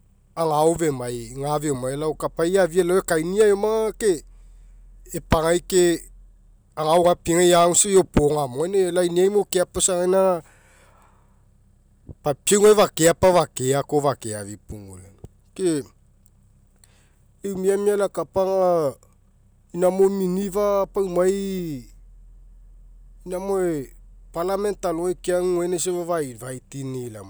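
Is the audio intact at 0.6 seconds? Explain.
Yes, at 0.6 seconds the speech plays through intact, with no dropout, click, distortion or other fault at that moment.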